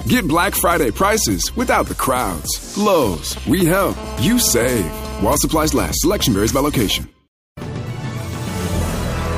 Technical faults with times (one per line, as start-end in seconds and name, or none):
3.13-3.86 GSM signalling bursts
3.97-5.34 GSM phone buzz